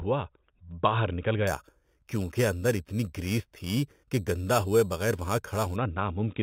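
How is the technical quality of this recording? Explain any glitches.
The recording has one clear fault. Imaging from sample-and-hold upsampling runs from 1.47 to 5.76 s, starting just after "باہر نکل". The speech sounds like 8 kHz audio raised to 48 kHz by repeating each sample without smoothing. Mirrored copies of the spectrum fill the 4–8 kHz band at about 17 dB below the speech, giving a bright metallic fizz that tracks the speech level and moves against its pitch.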